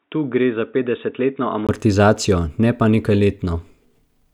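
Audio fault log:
0.00–1.69 s, input switched to a poorer device: the opening speech sounds dull and boxy, with nothing above 3.8 kHz, sitting roughly 10 dB lower and carrying its own faint background noise far beneath the voice. At 1.69 s there's a 20 ms gap, then the full, brighter sound arrives. That's most likely the system moving off a narrowband input, such as a headset's call profile, onto the proper microphone partway through the recording.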